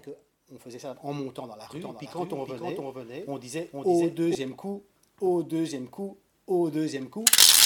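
From 1.75 to 4.35 s a full-band copy trails half a second behind, somewhat quieter, dry, then cuts off abruptly: a doubled audio track, likely from a second, slower capture path.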